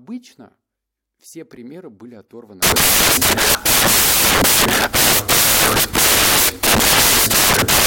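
Samples are built from the wrong bytes from 2.63 s, after "все примеры были оторваны", so low bits dominate and loud, harsh broadband noise replaces speech.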